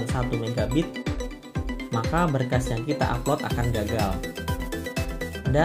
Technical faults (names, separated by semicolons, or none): pre-emphasis left on